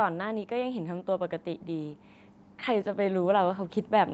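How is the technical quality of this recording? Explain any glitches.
The recording has one glitch, in the last stretch of the speech, heard through a call path whose audio stops at about 8 kHz.

Automatic gain rising, from 2.66 s to the end at 4.14 s: the gain control judged the input too quiet and kept raising its gain, so voice and background swell together.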